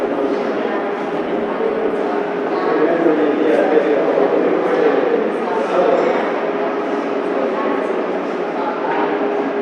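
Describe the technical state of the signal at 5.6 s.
At 5.6 s the signal is intact, with no dropout, distortion or other audible fault at that point.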